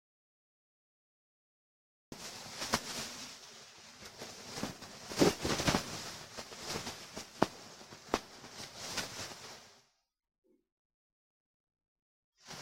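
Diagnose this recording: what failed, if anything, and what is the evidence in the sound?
An audio dropout to silence runs from the start to 2.12 s: silence with no room tone, likely a lost input link while the recorder kept writing.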